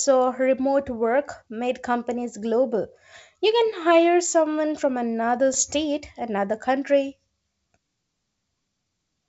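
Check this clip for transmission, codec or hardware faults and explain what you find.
One fault stands out: a short, rough burst with pops and a brief change in level, from 5.53 to 5.63 s. These are bit errors on an ADPCM link, here the G.722 wideband path. Flipped bits, around half a percent of them, throw the decoder's step size and predictor off track. Each error therefore rings on for some milliseconds instead of clicking once.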